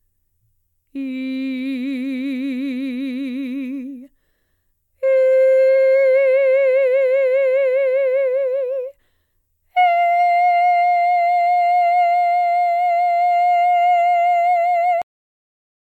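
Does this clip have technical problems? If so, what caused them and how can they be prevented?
Yes, there's a cut-off end: at 15.02 s the music stops mid-sound into digital silence, because the final buffers never got written or played. Flush and close the stream properly before ending the recording.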